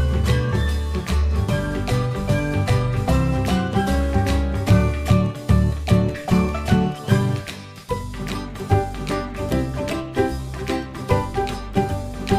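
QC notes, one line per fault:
No faults heard.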